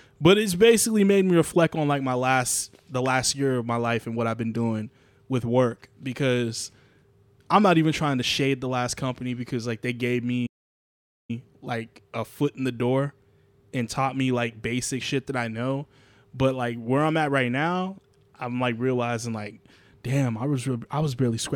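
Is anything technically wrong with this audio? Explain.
Yes. From 10.46 to 11.31 s the speech stops mid-flow and the output goes silent for about 0.83 s. This is a playback stall, likely the player running out of data or its thread being blocked. Unlike a natural pause, it cuts in abruptly and holds a flat silence until playback recovers.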